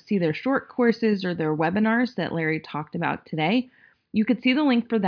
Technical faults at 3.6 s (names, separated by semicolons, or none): none